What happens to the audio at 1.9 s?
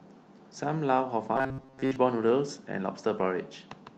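Robotic sound from repeated short buffers from 1.36 to 1.96 s: a rigid 133 Hz buzz, likely from repeating about 7.5 ms chunks. Its pitch stays fixed, unlike codec warble.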